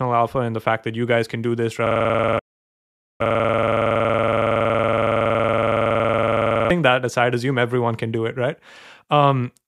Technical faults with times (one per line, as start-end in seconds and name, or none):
1.87-6.70 system hang loop
2.38-3.21 playback stall